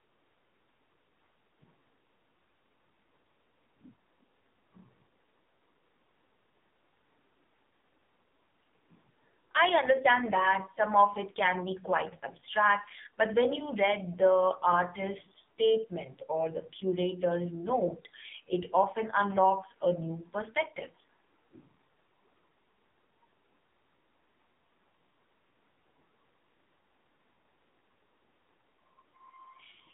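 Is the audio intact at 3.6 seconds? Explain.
No. At 3.6 seconds the speech carries the AMR narrowband mobile codec, present throughout. Nothing passes above 3.8 kHz, and the band runs from about 150 Hz to 3.7 kHz. The vocal-tract model is driven by sparse pulses, so the voice sounds heavily buzzy and synthetic, which fits a very low rate near 5.9 kbps.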